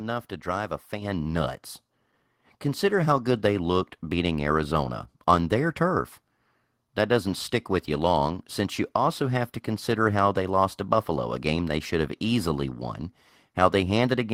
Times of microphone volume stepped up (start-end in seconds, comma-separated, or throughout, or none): 1.02